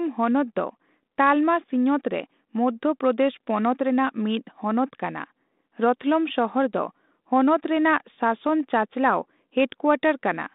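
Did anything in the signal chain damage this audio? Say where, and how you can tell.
No, nothing in this speech stood out on listening as damage from any stage of the signal chain.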